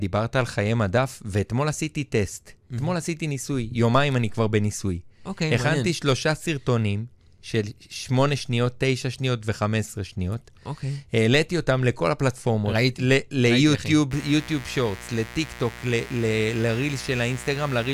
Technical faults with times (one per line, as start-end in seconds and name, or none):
14.11-17.94 mains buzz